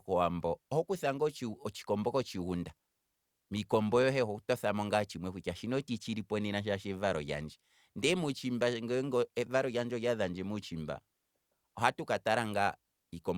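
No technical faults detected.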